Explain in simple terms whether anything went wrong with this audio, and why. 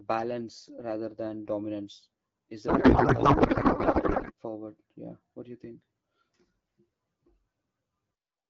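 From 2.67 to 4.32 s the speech turns into garbled, warbling noise that barely follows the talking. This is a codec payload misread: the two ends of the call disagreed on how the voice data was packed, so the receiving side read the right bits from the wrong places.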